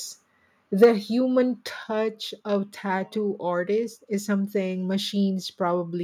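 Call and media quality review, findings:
Microphone overload, 0.83–0.86 s: harsh crackle on a loud speech peak, flattened tops on around a third of samples, driven about 6 dB past full scale. Likely cause: mic input gain set too high, saturating the converter.

Microphone volume stepped down, 0.84 s: abrupt level drop of about 3 dB in speech and background together, right inside the distorted peak. Likely cause: call software's automatic gain reacting to the clipping and cutting device input volume in one step.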